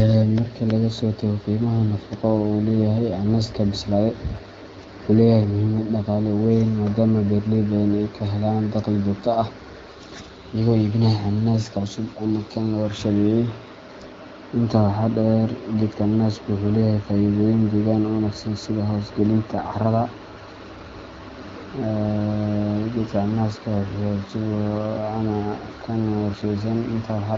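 No technical faults can be heard in this speech.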